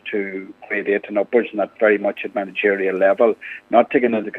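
Nothing here sounds wrong: no dropouts, glitches or other technical trouble turn up anywhere in the audio.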